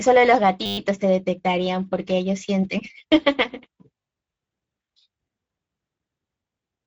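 From the very start and all the way through, the speech carries Speex codec damage, and it's plainly audible. The voice has that hoarse, slightly grainy CELP quality you get when the excitation is starved of bits, and the sound stops dead at about 7.7 kHz. The top band sounds like shaped noise rather than real detail, which fits a mid-range Speex setting somewhere around 16 kbps, the kind of thing older VoIP or game chat used.

Then at 0.66 s there's a system hang loop that runs to 0.78 s. What happened is the machine or its driver stalled while the audio hardware kept replaying the same tiny 10 ms slice of its ring buffer, about a dozen times over. Because the loop is so short, it comes out as a steady buzz at 100 Hz rather than a stutter. Then normal playback picks up again with essentially nothing dropped.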